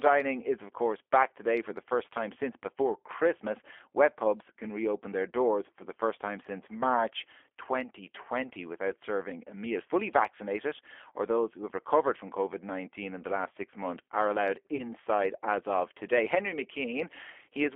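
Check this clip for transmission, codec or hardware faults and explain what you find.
Two faults are audible in this speech: a low-bitrate codec colouring the whole clip, and one brief concealed packet loss near the end.

G.729 codec, throughout: the speech is confined to roughly 300 Hz to 3.4 kHz and sounds slightly rough and synthetic, which fits an 8 kbit/s G.729 stream. The decoder rebuilds each frame from a vocal tract filter, a pitch predictor and a few pulses. Plain band-limiting would sound narrow but clean, without this grainy, artificial texture.

VoIP packet loss concealed by the speech codec, from 14.76 to 14.85 s: about 30 ms of audio was lost, which fits a single missing packet. The decoder filled the gap by repeating its last pitch and filter at falling gain, so the speech smears into a fading buzzy tone or coloured noise. The voice then stays weak for a moment before recovering. 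A plain dropout would leave silence or a click instead of this stretched sound.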